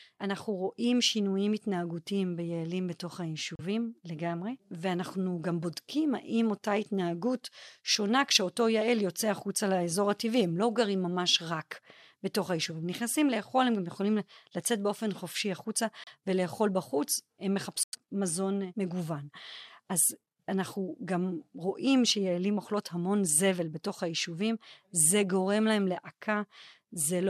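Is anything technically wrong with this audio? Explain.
Yes. Three brief dropouts in the speech at 3.55–3.60 s, 16.04–16.08 s and 17.83–17.95 s are likely a Bluetooth stall: delayed packets empty the headphone buffer, cutting about 36, 31 and 98 ms to silence before the sound resumes.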